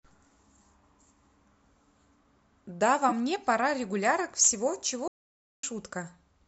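At 3.09 to 3.12 s and again at 4.39 to 4.42 s, a compressed frame arrived with flipped bits and the decoder played it anyway, a corrupt frame decoded. With its gains and codes misread, roughly one frame's worth of energy lands at the wrong frequencies, so each spot is heard as a short, brief blip cutting across the speech, lasting only a few hundredths of a second.

From 5.08 to 5.63 s there is an audio dropout to silence, likely from the input being lost while the recorder kept writing silence. The speech cuts off mid-flow and about 0.55 s of silence follows, with no room tone underneath. Then the sound resumes abruptly. Whatever was said during the gap is simply gone.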